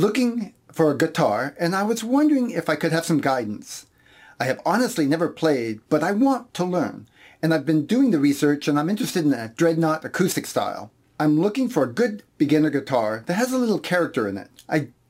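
Throughout the clip, a crude rate conversion with no proper filter repeats the nearest sample to fill the gaps, which fits a change from 44.1 kHz to 48 kHz. Its patterned error, about 30 dB below the signal, adds a gritty, inharmonic fizz that follows loud and high sounds.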